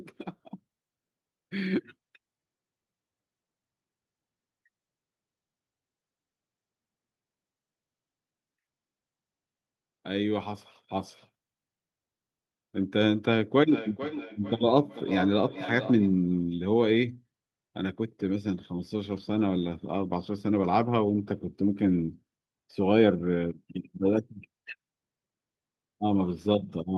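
From 13.6 to 16.2 s there's feedback echo between two devices. A second device in the room replays the call, its mic picks that up, and the speech comes back roughly every 400 ms, thin and ringy, peaking about 10 dB below the direct speech.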